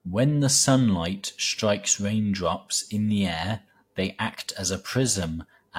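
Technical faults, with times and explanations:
No technical faults are audible anywhere in the speech.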